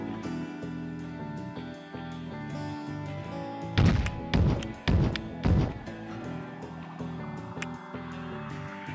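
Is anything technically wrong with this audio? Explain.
No, nothing is technically wrong: the audio has passed through a call's microphone processing, whose high-pass filter removes the lowest bass as intended, and its content stops at 8 kHz, both normal for that path.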